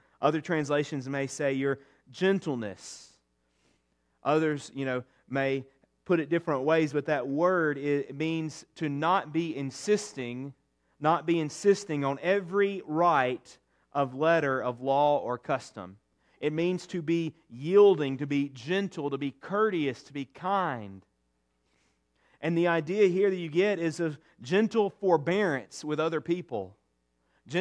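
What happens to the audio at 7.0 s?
Nothing goes wrong at 7.0 s: the speech carries on intact through that moment, with no dropout, click, glitch or other audible fault.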